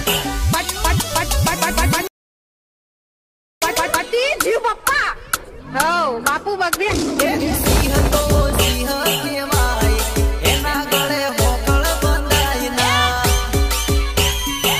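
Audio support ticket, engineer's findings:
Rebuffering stall, 2.07–3.62 s: player buffer ran dry, playback halted to silence about 1.5 s, then resumed exactly where it stopped. Nothing lost; 1.5 s added.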